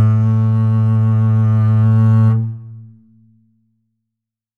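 No technical faults can be heard anywhere in the music. Nothing in the signal path stands out as going wrong at any moment.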